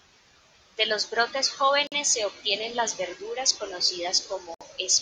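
Two brief dropouts interrupt this speech clip: a 48 ms gap at 1.87 s, between "los brotes" and "se obtienen las verduras", and a 63 ms gap at 4.54 s. Each has smeared edges, then the speech resumes where it stopped. These are gaps at a join of encoded pieces, where separately encoded segments were spliced without trimming each run's leading delay and final-frame padding.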